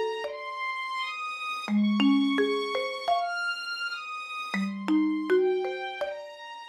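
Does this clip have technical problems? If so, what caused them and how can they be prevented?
No, there are no technical problems to prevent here.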